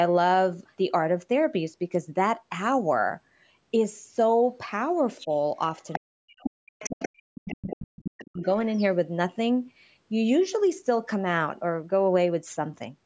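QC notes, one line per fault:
5.2–5.28 s, 5.92–5.99 s, 6.39–7.08 s, 7.48–7.77 s and 8.23–8.86 s: other side's voice leaking through. The far-end talker, played on the local loudspeaker, is likely not fully removed by the echo canceller, so a second voice rides under the main speech. The first and last scraps are faint, around 20 to 25 dB down. The middle three sit only about 10 dB below.
5.99–8.49 s: speech suppressed in double talk. With both sides talking at once, the echo canceller likely could not tell the local talker from the loudspeaker echo and clamped down on both. Across roughly two seconds of this span, the main voice ducks and breaks up in pieces, at worst falling by around 40 dB.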